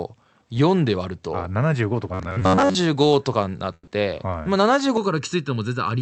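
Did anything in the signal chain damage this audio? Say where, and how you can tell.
Yes. From 2.14 to 2.75 s the speech turns into a rigid, metallic buzz near 93.8 Hz that only loosely tracks the syllables. This is robotic sound from repeated short buffers, at the driver or buffer stage. The likely cause is late audio delivery: the software fills the gaps by replaying the last chunk, and most of that stretch is repeats. The buzz period of about 10.7 ms fits a buffer of that length, and the real audio in between is skipped.

Inside that stretch, at 2.39 to 2.43 s, a brief smear marks short concealed packet loss on the network side of the call path. About 20 ms of audio never arrived in time. The receiver continued the preceding sound to bridge the hole and then blended back into the real stream. The smear is short because the patch itself is only about 20 ms.

At 3.73 to 3.89 s there is a burst of packet loss. 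The last sound is held and fades, ending in about 40 ms of silence, about 140 ms of fill in all, and the audio resumes further along, with the part in between gone. Several consecutive packets were lost or came too late. The receiver extended the last sound and faded it down as the gap grew, then gave up before fresh packets arrived.

From 4.97 s to the end the audio goes hollow and phasey, a case of channel delay (comb filtering). One channel lags the other by roughly 0.7 ms, and when the two are summed to mono, the shared content cancels at evenly spaced frequencies. The first notch sits around 700 Hz, with further notches repeating up the spectrum. That pattern of fixed dips produces the hollow colour.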